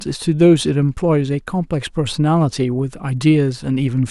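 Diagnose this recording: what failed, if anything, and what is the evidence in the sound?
Nothing in the sound of this speech recording stood out as a failure at any stage on listening.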